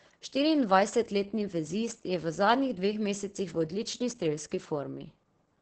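The clip is speech with heavy Opus voice compression throughout. The band stops sharply, with nothing above 8.7 kHz. That points to the wideband SILK mode, the linear-prediction coder Opus uses for voice. The excitation is coded coarsely, so the voice sounds muffled, hoarse and slightly robotic. The damage is heavy and fits a very low bitrate, around 10 kbps. Too few bits are left to model the fine detail of the waveform.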